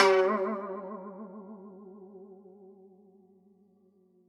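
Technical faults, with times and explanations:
The music signal shows no technical faults at any point.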